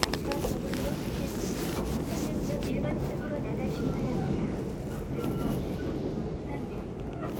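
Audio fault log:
Nothing to log here: I listened all the way through and didn't catch a single fault in this one.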